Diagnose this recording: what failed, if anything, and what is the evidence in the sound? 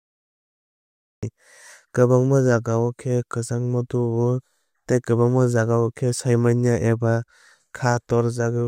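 The failure is a cut-off start, at the capture or stream-start stage. The clip opens with digital silence from 0 to 1.23 s. At 1.23 s the speech appears abruptly, already partway through a sound. There is no natural attack and no fade-in. The recording began late relative to the talker. The first part of that utterance was never captured, so the file jumps straight from silence into the middle of speech.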